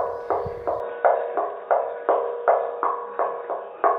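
From 0.8 s to the end the sound goes dull and boxy, with nothing above about 3.8 kHz, and a faint new background noise comes in. There's no gap at the change and the level stays about the same, so the input was likely switched to a poorer device.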